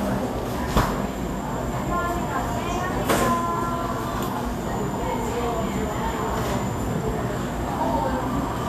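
It's everyday sound with plainly audible Vorbis compression throughout: hissy, grainy treble with nothing above 14.2 kHz, likely a low-bitrate encode, which fits roughly 34 kbps.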